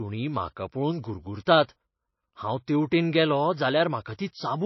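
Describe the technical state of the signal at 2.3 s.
Low-bitrate audio saved at a high bitrate is present at 2.3 s, as it is across the whole clip. The speech has nothing above about 5.8 kHz, and it carries the coding artefacts of a heavily compressed MP3, which fits a first pass near 25 kbit/s. This was likely then re-encoded at a high bitrate, around 256 kbit/s. The second pass kept the damage intact but could not restore the missing top end or remove the artefacts.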